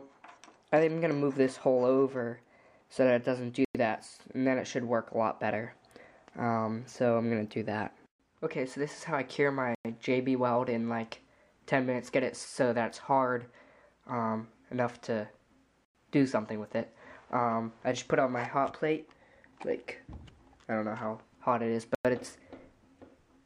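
At 3.65, 9.75, 15.85 and 21.95 s you get a gap between chunks: a clean 100 ms hole, repeating every 6.1 s. The audio was delivered in 6 s chunks with silence inserted at each join, so nothing's lost, just interrupted.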